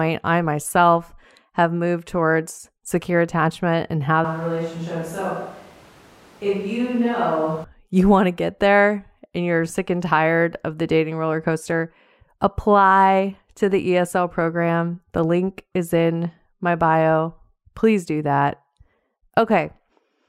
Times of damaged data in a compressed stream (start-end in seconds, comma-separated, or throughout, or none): none